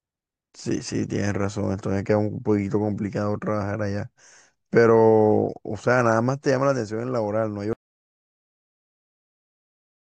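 The speech runs normally until about 7.73 s, then cuts off abruptly and the clip stays silent, with no room tone or background, through to the end at 10.13 s. This is an audio dropout to silence: the input was likely lost, through a disconnected device, failed link or accidental mute, while the recording carried on writing silence, so whatever followed in those last 2.4 seconds is missing entirely.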